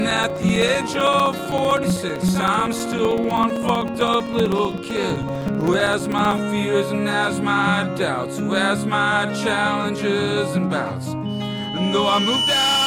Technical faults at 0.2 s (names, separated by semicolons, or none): periodic USB or driver dropouts